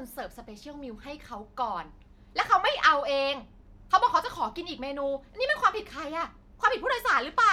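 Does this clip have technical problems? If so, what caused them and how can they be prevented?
No, there's nothing technically wrong to hear in this speech clip, so there's no cause to track down and nothing to prevent.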